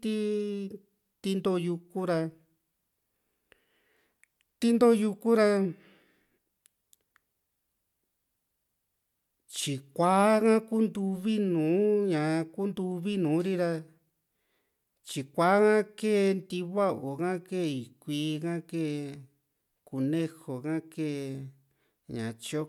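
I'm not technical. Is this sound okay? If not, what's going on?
Yes, it's fine: nothing in this recording sounds broken or glitchy, so there's nothing you need to worry about.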